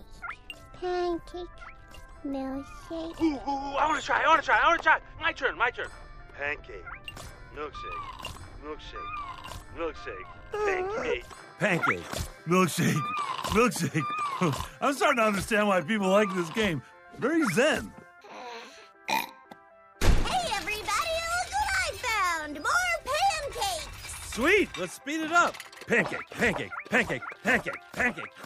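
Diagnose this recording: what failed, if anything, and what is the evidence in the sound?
Nothing in the signal chain shows a fault, with no stage from wiring through playback leaving a mark anywhere in the recording.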